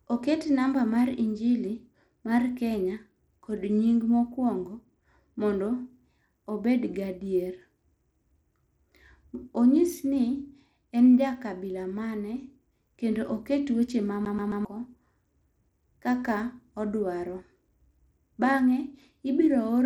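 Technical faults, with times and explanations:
throughout: Bluetooth SBC compression, likely the cause of plainly audible codec damage across the whole speech clip. The top of the spectrum thins out and flickers while a gritty, grainy noise clings to the sound, with aliasing riding on it. The starved high sub-bands get few or no bits, and the remaining bands are quantised coarsely, which fits a bitrate near 96 kbps. The damage is steady and band-wise rather than a smeared, swirly masking artefact.
14.25 to 14.65 s: CD stuck on one turn. The same 0.13 s slice of audio plays three times in a row, with a tiny mute at each jump. This is a quick, evenly spaced stutter. A laser thrown back a track at the same spot on each rotation repeats one fixed segment until it clears. That evenness tells it apart from a network dropout, which fills gaps with varied or decaying fragments rather than exact repeats.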